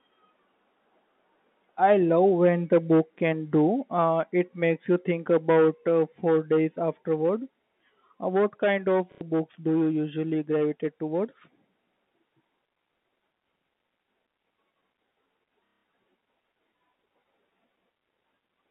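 Packet loss with the last packet repeated occurs at 9.12 s, just after "what kind of", for 90 ms, and at 15.66 s for 180 ms. The receiver replays the previous packet, which fits 30 ms packets, so each gap buzzes at about 33 Hz as a robotic stutter.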